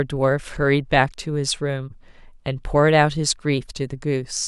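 Nothing goes wrong anywhere in this bit of speech, so there's no technical fault to point out.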